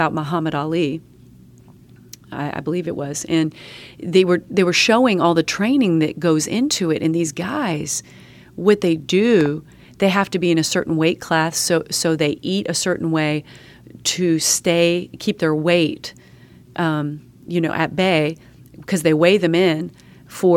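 At 9.41 to 9.48 s, two sharp pops, roughly 10 dB above the speech, which carries on underneath: a loud pop, likely from a plug, switch or static voltage pulse.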